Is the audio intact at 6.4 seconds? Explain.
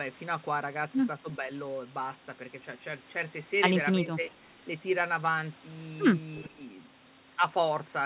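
No. From 6.37 to 6.48 s there is an echo leak. A faint, delayed copy of the sound, about 25 dB below the main level, arrives roughly 363 ms after the original. The likely cause is a far-end loudspeaker whose echo canceller failed to remove what its microphone picked up, so the residue was sent back down the line. A single distinct late copy like this is different from room reverberation, which smears continuously from the original with no clear gap.

Right after, from 6.49 to 6.61 s, comes speech suppressed in double talk. The level dips by roughly 15 dB over about 100 ms. The echo canceller likely mistook overlapping talk for echo and turned the whole signal down. The sound sinks briefly and then recovers, and never drops to full silence. It also lacks the buzzy or repeated fill that packet-loss concealment leaves behind.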